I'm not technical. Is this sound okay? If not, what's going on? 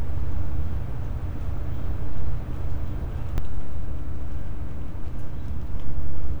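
No. The sound is most likely being picked up twice, with a second, slower route or a doubled edit adding another copy about a second behind the first. This is a doubled audio track. From the very start until 3.38 s, everything you hear repeats roughly a second later at about the same loudness, as a clean duplicate rather than an echo fading into a room. At 3.38 s the copy stops abruptly, leaving a single track.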